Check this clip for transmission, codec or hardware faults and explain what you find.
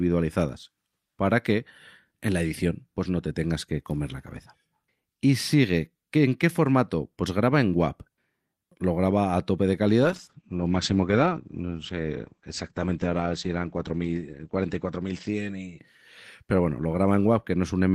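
One fault is present: a call bitrate drop. It begins at 10.05 s, right after "graba a tope de", and lasts until 17.59 s. The call's bandwidth estimate fell, so the Opus encoder was given far fewer bits. It codes the speech more coarsely and trims the top of the spectrum. Audio bandwidth shrinks from about 20 kHz to 8 kHz. The speech turns muffled and rough. The worst stretch lasts about 4.5 s, which fits a fall from roughly 40 kbps to around 9 kbps.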